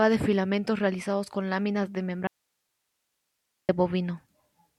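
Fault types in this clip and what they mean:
Audio dropout to a faint residue: the speech cuts out abruptly at 2.27 s and returns at 3.69 s, leaving about 1.4 s of quiet hiss some 55 dB below the signal. The feed was likely lost while the downstream path stayed live.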